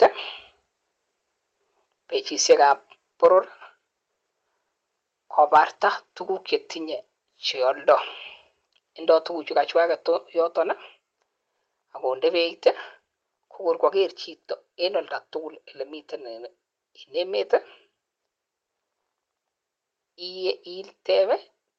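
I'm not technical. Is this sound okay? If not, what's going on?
No, there are two related problems right at the start, and they keep coming back.

The first is microphone overload, which happens three times: at 0.02 to 0.06 seconds, 3.24 to 3.38 seconds, and 5.39 to 5.6 seconds, just before "tugukche tinye che". The loudest bits of speech briefly get a rough, crackly edge. That's most likely because the mic input was set too hot, so the tops of the loudest moments got chopped off flat instead of being recorded cleanly.

The second is a microphone volume stepped down, at 0.03 and again at 3.26 seconds. Right as the first two crackles hit, everything, the voice and the room behind it, suddenly gets a little quieter in one jump. The call software probably noticed the distortion and turned the mic down by itself. It's a small drop, but it's abrupt rather than gradual.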